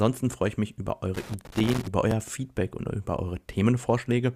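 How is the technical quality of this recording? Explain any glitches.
The recording has two glitches, an intermittent contact and a segment-joining error in the stream.

From 1.14 to 1.88 s, just after "freue ich mich über", there is loose connector crackle. A worn or dirty contact repeatedly broke and restored the signal path, chopping the speech and injecting pops from any DC on the line. This produces an irregular burst of scratchy crackle.

At 2.11 s there is an overlap between stream segments at the join of what sound like 2-second segments. The time stamps of adjacent segments overlapped, so the player discarded about 16 milliseconds of audio that was never duplicated. The waveform jumps, producing a brief click or tiny skip.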